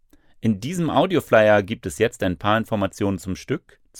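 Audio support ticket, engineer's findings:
No audible technical fault found in the signal path on review; level, continuity and timing present as expected throughout the capture.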